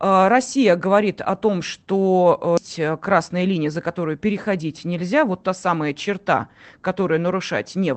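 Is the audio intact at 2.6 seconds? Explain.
No. A skip ahead occurs at 2.57 to 2.59 s: about four tenths of a second of speech never reaches playback, either lost in transit or discarded by the jitter buffer once later audio was already queued. Nothing fills the hole, so the speech on either side of the jump is butted together almost directly. The listener hears an abrupt forward jump, with part of the utterance simply absent.

Right after, from 2.67 to 3.97 s, comes a jitter buffer speed-up. Having fallen behind, the receiver trims away short slices one or a few pitch periods long, over and over, to shrink the excess delay, removing roughly a tenth of a second in total. Playback runs at 109% of normal speed while the pitch stays unchanged, so this stretch sounds hurried.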